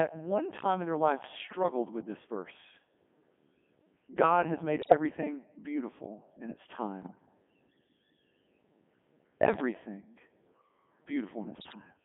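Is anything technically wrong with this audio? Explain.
Yes. Throughout, the speech sounds robotic and buzzy, confined to a narrow telephone-like band of roughly 200 Hz to 3.4 kHz, with heavy smearing of anything beyond a single clean voice. This is the Codec 2 vocoder at 3.2 kbit/s. It transmits only pitch, voicing, energy and a coarse spectral envelope, and the decoder rebuilds the voice from sine waves, so the original waveform never survives.

Four short bursts break into bleeps, warbles and garbled synthetic babble, with sudden jumps in pitch, loudness and tone colour. They occur at 1.38 to 1.63 s (after "time in their life", before "with this verse"), 4.82 to 4.94 s (after "has made"), 7.02 to 7.26 s (after "beautiful in its"), and 11.56 to 11.75 s. These are bit errors on digital voice radio. At an error rate of a few percent, flipped bits corrupt the parameters for entire frames, and the lengths of the bursts point to roughly five to ten frames being hit each time.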